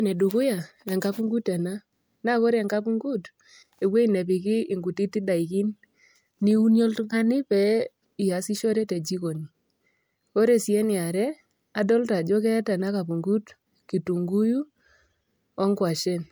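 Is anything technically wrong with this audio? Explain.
No, nothing technically wrong can be heard in this speech recording; the signal stays steady and intact throughout.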